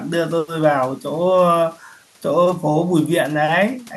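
No technical faults can be heard anywhere in the recording; the signal stays continuous and steady throughout.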